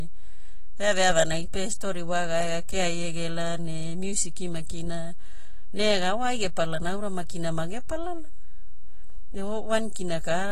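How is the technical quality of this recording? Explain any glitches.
Two faults run through the whole recording, and both limit its technical quality.

DC offset, throughout: the waveform sits shifted off zero by a constant amount. You can't hear it directly, but it wastes headroom and leaves steady energy at the very bottom of the spectrum.

AAC compression, throughout: the speech sounds plainly dull and smeared, with a fizzy, warbling texture and nothing above 14.1 kHz. That likely comes from AAC-LC coding at a low bitrate, consistent with about 32 kbps.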